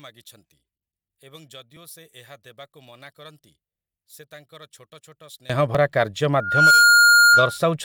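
From 0 to 5.5 s the summed speech drops by about 24 dB; one channel inverted is the likely cause, cancelling the centred material in mono. An overlap between stream segments at 1.77 s and again at 5.75 s trims about 18 and 14 milliseconds of audio, leaving a tiny skip, which fits 2-second segments. From 6.4 to 7.59 s a loudspeaker feedback squeal at 1.4 kHz builds within about a third of a second to roughly 10 dB above the speech.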